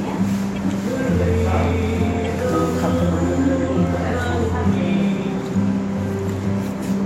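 At 0.55 to 0.57 s and again at 2.25 s, a corrupt frame decoded: damaged bits in the compressed stream were played as if valid, so misread gains and codes put energy at the wrong frequencies. Each is heard as a brief chirp, blip or burst of noise, the first slightly longer, suggesting a few frames hit versus one. On a spectrogram each shows as a short, sharp-edged block of stray energy across unrelated bands. On the waveform it shows as a sudden burst peaking somewhere around -25 dBFS.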